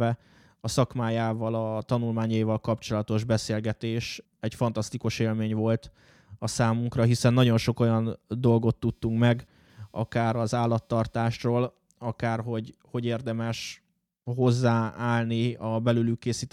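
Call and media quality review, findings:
Computer activity noise, 8.89 to 11.36 s. Faint buzzing chirp under the speech, around 200 pulses per second, roughly 45 dB below signal. Probable component: host PC, with processor, graphics or mouse load shifting the shared ground of the audio interface. Spectrogram: comb of harmonics spaced near 200 Hz, starting and stopping abruptly, independent of the speech envelope. Waveform: low-level pulse train visible in pauses. Fix: ground isolation or an external interface.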